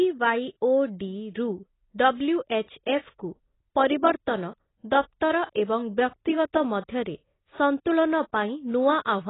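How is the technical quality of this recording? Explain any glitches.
The technical quality is poor: heavy AAC compression damage runs through the whole recording. The likely cause is a low-bitrate AAC-LC encode, consistent with something around 16 kbps, where the encoder has too few bits to code each frame's frequency lines faithfully and discards content the hearing model judges least audible. Nothing remains above 3.9 kHz, so the speech sounds dull and muffled, and the sparse, coarsely quantised spectrum below that gives sibilants and sustained sounds a smeared, warbling, fizzy texture.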